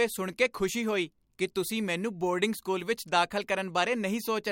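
No technical faults can be heard anywhere in the speech. Nothing interrupts or alters the sound at any point.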